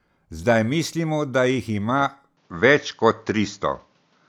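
Speech turning duller from 2.37 s, just after "mislimo da jih ima", to the end. The spectrogram abruptly loses everything above 7.2 kHz, and the waveform steps about 5 dB without any gap, over a faint new noise floor. This is likely an input switched to a poorer device.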